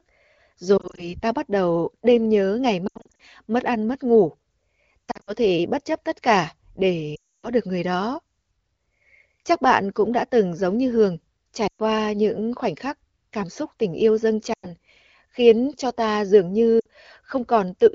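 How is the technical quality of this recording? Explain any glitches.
The recording has repeated dropouts from lost AMR speech frames. The wideband (HD Voice) channel carrying the speech is only lightly coded, which fits a rate near 16 kbit/s.

Lost AMR speech frames occur at 0.77–1.14 s, 2.87–3.21 s, 5.11–5.32 s (just before "thể bất chấp tất"), 7.15–7.48 s (before "được người đó"), 11.67–11.81 s (between "từng giống như hường" and "những khoảnh khắc cảm"), 14.53–14.69 s and 16.80–16.86 s. Damaged frames fail their check, so the decoder repeats the last good pitch and vocal-tract settings at falling gain. The short gaps are brief dips and warbles. Near 7.2 s, about 0.28 s is lost: the sound drops to near silence before speech returns weak and rough.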